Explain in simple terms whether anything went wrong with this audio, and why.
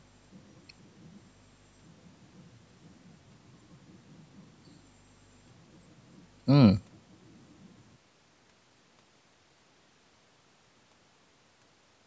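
Nothing went wrong with this audio; the speech has simply passed through a call's microphone processing, which trims away the deepest bass as it normally does.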